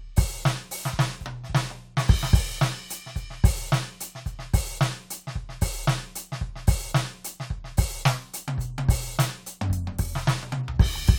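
No technical faults can be heard in this music.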